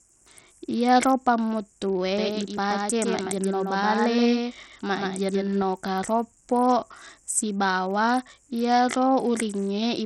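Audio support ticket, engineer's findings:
Whole clip: dull speech; treble missing or flickering, gritty noise and aliasing riding on it. Likely Bluetooth SBC compression with a starved bit pool, consistent with a low bitrate near 64 kbps; top sub-bands get few or no bits, the rest coarsely quantised.

2.18–5.62 s: speech heard twice, a dry full-band copy roughly 150 ms behind, about 5 dB quieter, no reverb tail, cutting in and out abruptly. Likely a doubled audio track from a second, slower capture path mixed in.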